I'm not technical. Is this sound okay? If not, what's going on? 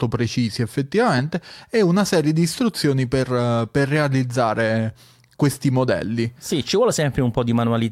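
Yes, I can't hear anything wrong with this recording.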